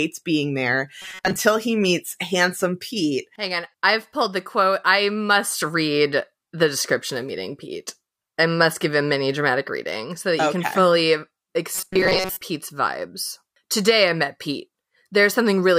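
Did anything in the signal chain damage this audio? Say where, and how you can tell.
Yes. At 1.02–1.36 s and 11.75–12.41 s the speech becomes a rigid 188 Hz metallic buzz: robotic sound from repeated short buffers, likely at the driver or buffer stage. A 5.3 ms block loops while most real audio is skipped. Spectrograms show evenly spaced harmonics; waveforms show identical repeating cycles.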